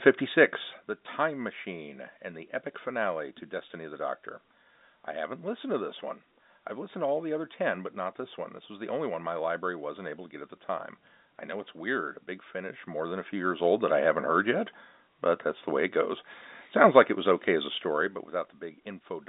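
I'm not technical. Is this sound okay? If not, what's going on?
Yes, nothing is wrong with this speech recording. It has the narrow sound of an ordinary telephone line, with nothing above about 3.8 kHz, and where the volume rises or falls it does so gently, like a hand easing a slider.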